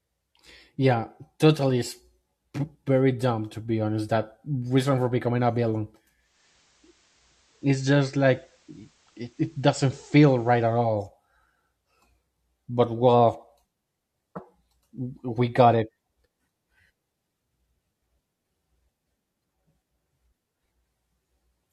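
A speech clip where, just after "for becoming a villain" at 6.15 s, faint hiss rises and level drops about 1 dB until 10.98 s. This is digital radio blending to analogue: a 314 ms cross-fade to the FM broadcast and back.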